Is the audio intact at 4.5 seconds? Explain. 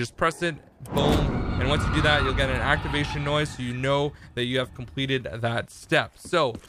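Yes, the audio is intact at 4.5 seconds, with no dropout, click, distortion or other fault audible at that point.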